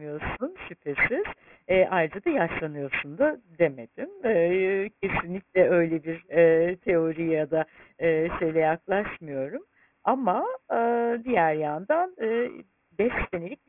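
Throughout the speech there is aliasing. Energy above 3 kHz folds back below that edge, which fits a drop to a 6 kHz rate with no filter first, so sibilants turn gritty and metallic, sitting only roughly 10 dB under the speech. Plain band-limiting would sound dull instead.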